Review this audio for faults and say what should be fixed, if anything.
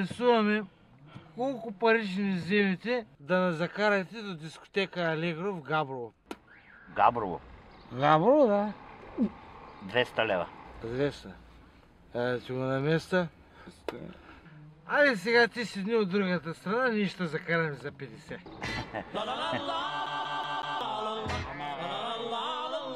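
There is a CD stuck on one turn, from 20.06 to 20.81 s. A short slice of about 0.19 s plays four times in a row. A brief mute falls at each jump. The result is a fast, even stutter. A scratch makes the laser lose its place at the same point on each rotation, so it falls back one track and rereads the same spot. Fix it by re-ripping that passage. To prevent it, rip from a clean disc with a secure, error-checking ripper.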